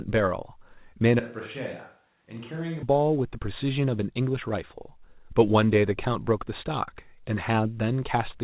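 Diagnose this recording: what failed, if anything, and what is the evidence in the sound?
At 1.20 s the speech abruptly turns roomy and hollow, with thinner bass. The level falls by about 10 dB, and background noise sits roughly 40 dB below the speech. It snaps back at 2.83 s. The cause is likely a switch to a distant microphone at capture, after the close microphone dropped out.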